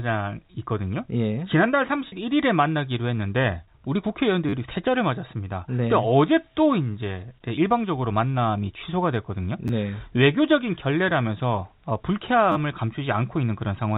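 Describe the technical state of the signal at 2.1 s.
A brief held, buzzy sustain from 2.08 to 2.12 s is packet loss with pitch repetition: about 40 ms went missing, which fits two lost packets, and the receiver bridged it by repeating the last pitch period.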